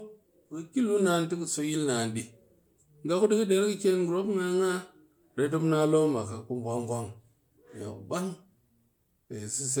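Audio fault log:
Throughout: generation loss. The speech sounds swirly, smeared and hollow, more damaged than a single encode at a bitrate around 128 kbit/s would leave, and consonant onsets are blurred. This is likely from MP3 encoding repeated about four times, each pass quantising again on a shifted frame grid so the errors pile up. A spectrogram would show scattered holes and flickering blocks in the upper bands and nothing above 20 kHz, and the waveform would show softened transients.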